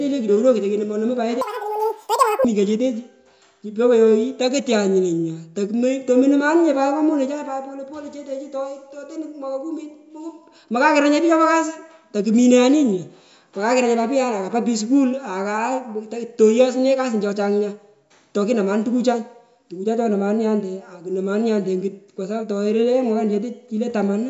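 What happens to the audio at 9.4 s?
Nothing goes wrong at 9.4 s: the speech carries straight through that moment with no dropout, click, distortion or other break in the signal.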